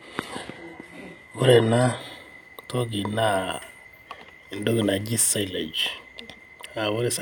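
Speech, opening with an adaptive stream starting at a low bitrate. From 0.0 to 2.0 s, nothing sits above 12.3 kHz. The treble sounds synthetic and codec artefacts are strong, which fits 16 kbit/s HE-AAC. At 2.0 s, quality jumps without a gap, as the player moves to 96 kbit/s AAC-LC.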